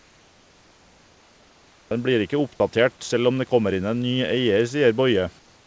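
Comfort noise in place of the background, 0.0–1.91 s and 5.39 s to the end: a flat, featureless hiss about 3 dB quieter, likely synthesised while the sender paused transmission.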